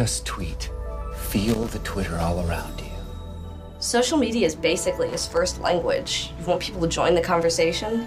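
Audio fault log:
1.48–1.70 s and 5.09–5.37 s, loose connector crackle: two short irregular bursts of scratchy crackle, each a little over 0.2 s, as a worn or dirty contact in the signal path rapidly makes and breaks, chopping the audio.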